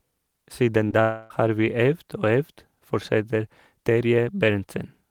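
From 0.84 to 1.01 s the stream suffers repeated packet loss (robotic sound): four short gaps, the longest 12 ms, together about 40 ms, are each patched by extending the preceding speech, so the voice turns choppy, with small pieces missing.

From 1.01 to 1.31 s the signal is smeared into a fading buzz or hiss for about 0.29 s. This is likely a long network dropout: nothing arrived, and the receiver stretched the last sound across the whole hole rather than falling silent, until speech returns without the lost part.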